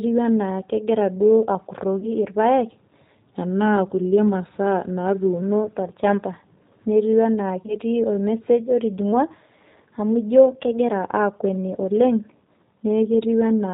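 Speech, coming through the G.729 codec the whole way, and the codec damage is plainly audible: everything above 4 kHz is gone, and the voice has that slightly rough, synthetic edge you get when it's rebuilt at 8 kbit/s from a vocal tract filter, a pitch predictor and a few pulses per frame. Two short dropouts show up as VoIP packet loss concealed by the speech codec, from 1.99 to 2.09 s and again from 7.66 to 7.77 s. Each fits about 20 ms of lost audio, a single packet, with the decoder stretching its last frame into a fading patch that stays weak or distorted until the stream settles again. Then there are two speed-and-pitch shifts. From 3.28 to 5.42 s the audio runs about 6.3% slow and drops roughly 113 cents, a bit over a semitone. From 9.13 to 10.92 s it runs 6.3% fast and rises roughly 106 cents. Both then snap back, which is likely a drift correction step, where clock-matching software jumps the playback rate to drain or refill its buffer.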